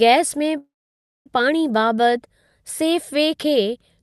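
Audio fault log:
0.57–1.28 s call audio freeze: a short fading fill, then about 0.58 s of silence, likely from late packets emptying the jitter buffer; speech resumes intact, just later.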